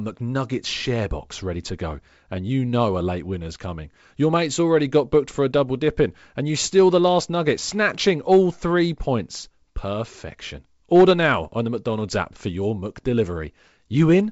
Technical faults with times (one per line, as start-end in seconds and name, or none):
none